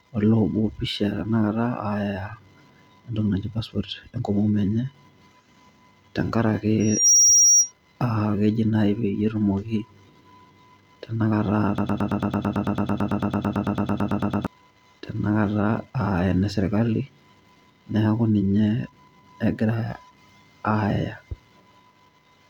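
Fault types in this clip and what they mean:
Loudspeaker feedback squeal: the microphone picks up its own loudspeaker and the loop runs away at 5.7 kHz, swelling over about a third of a second to roughly 10 dB above the speech from 6.80 to 7.72 s; a spectrogram shows one bright horizontal line.
Broken-record loop: from 11.78 to 14.47 s the same 111 ms piece of speech plays 24 times back to back, likely from a stalled player or stream resending its last fragment; the waveform shows identical repeating blocks, and the missing speech is gone.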